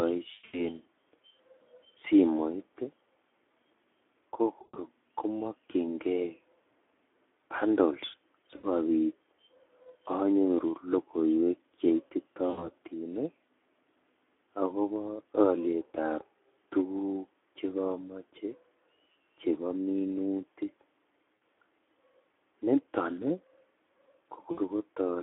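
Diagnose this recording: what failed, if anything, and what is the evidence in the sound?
Stage: codec. The whole recording carries Speex codec damage: a hoarse, noisy texture on every voiced stretch, which fits Speex at around 11 kbps. On a spectrogram the energy sits only between 300 Hz and 3.5 kHz, with blurred harmonics and a grainy fill between them.

Stage: network, with the speech decoder concealing the gaps. VoIP packet loss concealed by the speech codec is heard at 0.33–0.72 s (about 180 ms missing over 200 ms, longest run 100 ms), 4.61–4.78, 8.56–8.67, 12.49–12.69, 21.35–21.41 and 24.51–24.59 s. Each gap is stretched from the preceding speech and fades, and the waveform envelope decays smoothly instead of following syllables.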